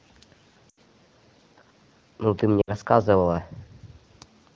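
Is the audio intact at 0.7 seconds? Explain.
No. From 0.69 to 0.78 s, lost AMR speech frames (about four 20 ms frames) make the decoder repeat stale settings with falling gain; harmonics flatten into smeared bands, and the waveform fades.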